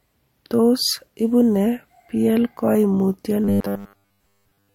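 Speech in which new audio likely arrived too seldom from 3.44 to 4.74 s, so a roughly 10 ms buffer was replayed most of the time. The result is robotic sound from repeated short buffers, a rigid metallic 100 Hz buzz.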